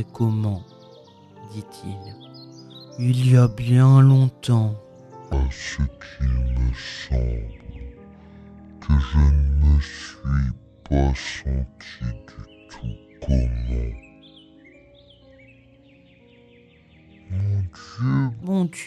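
From 5.33 s to 18.42 s the audio runs as a section at the wrong speed, at 0.607 times normal, so everything drops roughly ten semitones and drags, sounding deep and sluggish. The likely cause is playback or editing against a mismatched clock. On a spectrogram, harmonics and energy bands slide downward at 5.33 s and events stretch wider in time. The waveform's cycles and envelopes look elongated until normal speed returns at 18.42 s.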